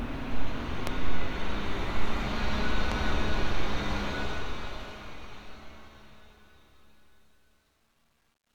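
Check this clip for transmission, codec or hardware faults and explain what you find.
Two hardware-style faults turned up. Loud pops at 0.87–0.89 s and 2.92–2.94 s, each roughly 10 dB above the sound, likely from a voltage spike like a plug or static, with the audio continuing underneath.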